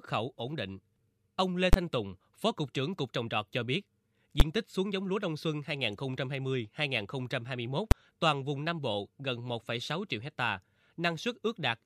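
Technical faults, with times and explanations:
1.73 s, 4.40 s (between "trồng trọt cho biết" and "tích xuống giống lúa") and 7.91 s (just before "toàn vùng"), invalid numbers at full scale. A calculation yielded infinite or invalid values, pinned at maximum level. Each block is short, about 12 ms or 6 ms, fitting 512-sample and 256-sample blocks. So each is heard as one sharp bang.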